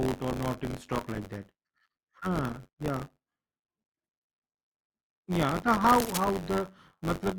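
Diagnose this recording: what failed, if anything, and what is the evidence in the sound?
Buffer tearing at the driver or buffer stage runs through the whole speech clip as a rattling, robotic buzz at 93.8 Hz that rides on the voice and vanishes in pauses. That rate fits a 512-sample buffer. The writing and reading sides have drifted into each other, so roughly a tenth of every period replays audio about 20 ms old. On a spectrogram this appears as regularly spaced vertical seams, with a comb of harmonics at 93.8 Hz during speech. In the waveform it shows as abrupt step discontinuities.

Cable scratch noise appears from 5.89 to 6.24 s as a brief burst of scratchy rustling laid over the speech, roughly 10 dB below it. The likely cause is a worn cable, connector or control being disturbed in the analogue wiring, where rapidly fluctuating contact resistance injects irregular noise. A spectrogram shows a ragged, broadband smear confined to that span. 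The waveform carries dense, uneven spiky fuzz superimposed on the signal.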